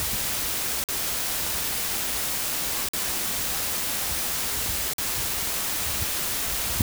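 A steady, even hiss runs under the whole audio from start to finish, sitting only roughly 10 dB below the signal, yet nothing sounds crunchy or distorted. This is low bit depth with dither. The waveform has been reduced to so few levels that it points to about 3 bits, and random dither was added before rounding. That turns the harsh, signal-dependent quantisation error into constant white noise, so the coarseness is heard as hiss rather than grit.

On top of that hiss, the sound drops out abruptly three times: from 0.84 to 0.89 s, from 2.89 to 2.94 s, and from 4.94 to 4.98 s. Each hole lasts about 48 ms, and the holes fall about 2.05 s apart. This is a gap between chunks. The audio was handled in 2-second pieces, and a stretch of silence was left at each join, as happens when padding is inserted or playback of the next piece starts late. The material itself continues on either side of each hole.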